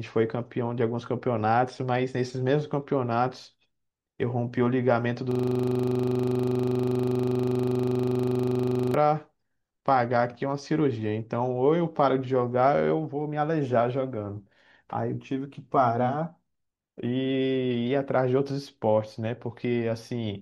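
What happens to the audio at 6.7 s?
A system hang loop runs from 5.31 to 8.94 s: a frozen 40 ms buffer repeats, giving a 25 Hz buzz, identical waveform blocks and evenly spaced spectrogram stripes.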